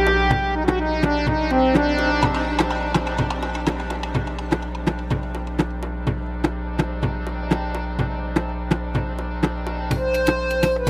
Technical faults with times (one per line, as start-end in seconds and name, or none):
0.00-10.90 mains hum
0.31-10.90 one channel drops out